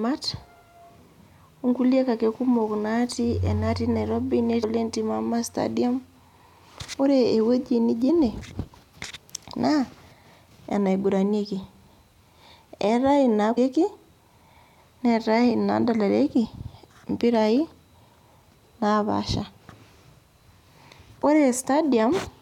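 Four short blips break up the speech, at 4.62 s, 8.08 s, 13.56 s and 16.44 to 16.46 s. Each lasts roughly 15 to 20 ms and sounds like a quick chirp or squawk. That's damaged data in a compressed stream. Bytes in the encoded file got corrupted, so the decoder misread those frames, lost sync and had to hunt for the next valid frame header before it could pick the audio back up.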